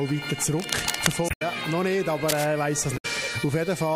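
From 0.58 to 1.16 s, and again from 2.28 to 2.46 s, dense, uneven bursts of scratching noise sit only a few dB below the signal. This is cable scratch noise, likely from a worn cable or connector whose contact resistance fluctuated as it moved. At 1.26 to 1.42 s and 2.94 to 3.05 s, short glitches mark damaged data in a compressed stream: the decoder misread corrupted frames, lost sync and resumed at the next valid header.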